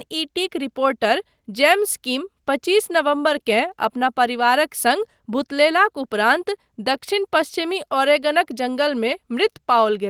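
No technical fault can be heard anywhere in this speech recording, and nothing in the signal points to a problem in its capture, processing or playback path.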